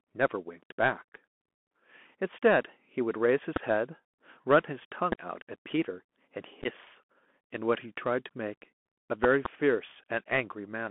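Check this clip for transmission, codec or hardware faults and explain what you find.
The speech carries three kinds of fault: narrowband Bluetooth codec damage throughout, four loud pops, and two bursts of headset packet loss.

Bluetooth CVSD headset codec, throughout: one-bit adaptive delta coding at 64 kbps holds the speech to roughly 200 Hz to 3.4 kHz, leaving scratchy sibilants, overload distortion and granular hiss.

Loud pop, at 3.56–3.59 s, 5.12–5.15 s, and a double pop at 9.24–9.48 s: sharp clicks about 20 dB above the speech, likely voltage spikes from a switch, static or a driver glitch.

Unconcealed Bluetooth headset packet loss, at 6.62–6.67 s and 8.82–8.87 s: several short voice packets dropped and were replaced with silence or an idle pattern. About 22.5 ms was lost across 30 ms in the first burst and 33.8 ms across 52.5 ms in the second, with gaps up to 11.2 ms long. These abrupt holes sound like a choppy crackle.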